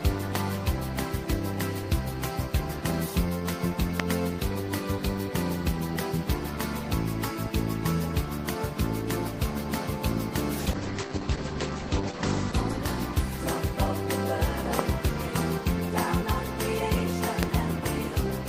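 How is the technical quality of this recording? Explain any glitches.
There are two kinds of glitch here: three loud pops and a stretch where the call's bitrate drops.

The loud pops land at 0.35 s, 4.0 s and 17.43 s, each a single sharp hit only a couple of hundredths of a second long. The first peaks at about 15 dB above the sound, and the other two at about 20 dB. They're likely voltage spikes, from a connector, a switch, static or a driver hiccup, that got into the signal. You hear a hard click or thump sitting on top while the audio carries on underneath.

The call bitrate drop runs from 10.6 s to about 13.6 s. The sound points to the encoder being pushed from roughly 32 kbps down to around 11 kbps once the connection's bandwidth estimate fell, and it sits at the bottom for about 1.7 s. With that few bits, Opus codes everything more coarsely and cuts the top end from about 20 kHz down to 8 kHz. 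So the audio goes dull, watery and a bit rough until the bitrate climbs back.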